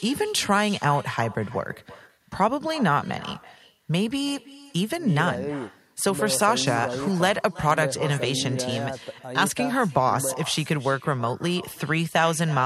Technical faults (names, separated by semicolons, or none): echo with no canceller